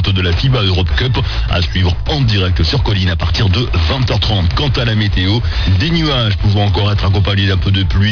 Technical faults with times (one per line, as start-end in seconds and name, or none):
0.00-8.12 aliasing